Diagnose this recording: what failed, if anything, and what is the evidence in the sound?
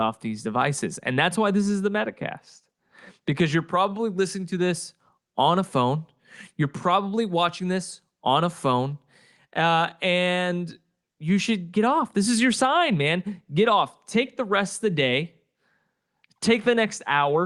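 Nothing failed here: the speech came over an ordinary call path, with the top end stopping around 12 kHz in a way that fits an Opus call codec doing its usual job, and nothing in the sound points to a broken stage anywhere along the chain.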